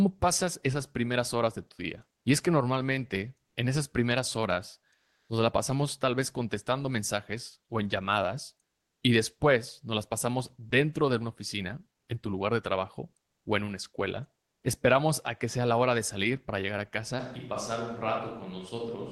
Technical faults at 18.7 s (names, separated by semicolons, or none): switch to a distant microphone